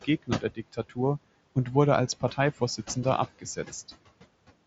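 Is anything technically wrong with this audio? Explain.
Yes, there are two related problems, both from the noise suppressor.

Noise suppressor artifacts run through the whole clip. The suppressor pulls the room noise down by about 21 dB wherever it judges a band to be steady background, deciding frame by frame. So the floor dips away between phrases and comes back up underneath the speech.

Speech cut by the noise suppressor shows up twice: from 0.04 to 0.99 s, and again from 3.39 to 3.58 s. Here it mistook real speech for noise and turned it down with the background, by as much as about 18 dB in the first stretch and about 16 dB in the second. Roughly 0.4 s of the first stretch is hit, and about a tenth of a second of the second. The affected bits sound swallowed and faint. The room noise underneath sits about 15 dB below the speech, and the band stops near 7.7 kHz, which fits the mSBC headset link.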